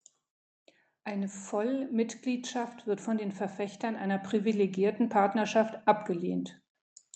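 From 1.05 s to 6.51 s, automatic gain rising is heard. The gain control judged the input too quiet and pushed its level up slowly, by about 9 dB. Speech and background noise swell together, growing steadily louder over those five seconds, through a call path whose coding noise and top end near 8 kHz fit Opus.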